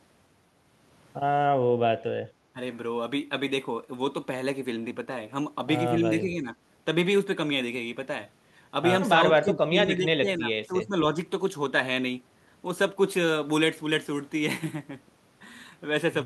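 Three dips pull the speech down, each most likely speech suppressed in double talk. At 2.53 to 2.59 s the level drops sharply, by roughly 15 dB; at 6.21 to 6.55 s it sags only slightly; from 9.41 to 10.96 s it falls away again by roughly 15 dB, in pieces totalling about a second. The echo canceller, unable to tell the talker from loudspeaker echo while both sides spoke, turned everything down.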